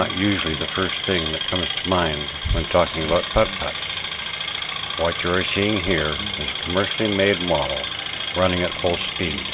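Nothing goes wrong here: there's not a single technical fault to point to anywhere along the way.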